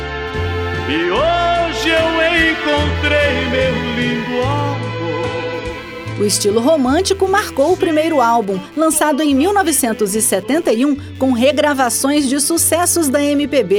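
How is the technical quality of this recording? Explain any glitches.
The recording carries one continuous fault. Computer activity noise runs throughout: a faint buzzing chirp pulsing around 150 times a second, roughly 35 dB below the sound. It comes from processor or mouse load disturbing the shared ground. Unlike steady mains hum, it varies with computer activity rather than staying fixed.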